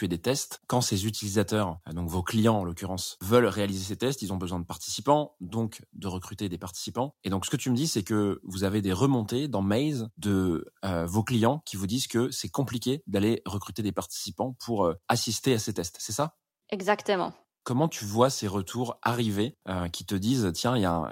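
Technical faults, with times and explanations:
Nothing technical trips up this speech recording at any point, so there's no fault to list here.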